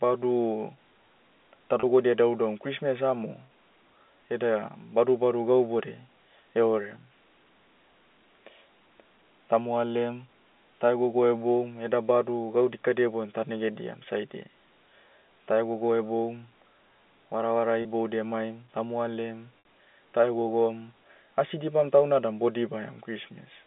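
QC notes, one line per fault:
1.80 s, 17.82 s and 19.59 s, packet loss with pitch repetition: the first two are brief 30 ms catches where the sound briefly hangs on a slightly buzzy, held tone. At 19.59 s a 60 ms gap holds longer and thins toward silence before the signal cross-fades back. The receiver bridged missing packets by looping the last pitch period while fading it out. The gap lengths fit one, one and two lost packets, heard through the 200 Hz to 3.5 kHz telephone band of the G.711 line.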